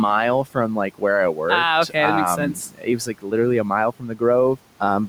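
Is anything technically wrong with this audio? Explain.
Yes. Speech cut by the noise suppressor occurs twice: from 2.37 to 3.33 s, just before "a mile", and from 3.92 to 4.22 s, just after it. The suppressor misreads quieter parts of the speech as the room noise, which sits about 24 dB below the speech, and attenuates them by up to about 12 dB. The affected sounds come out swallowed and faint, for a few hundred milliseconds in total. A waveform shows sudden amplitude dips, and a spectrogram shows faded or missing energy in those regions.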